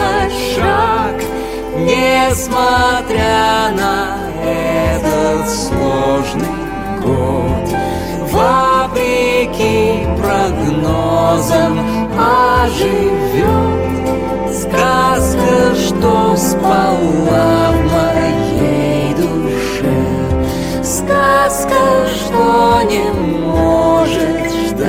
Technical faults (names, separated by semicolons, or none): drift correction step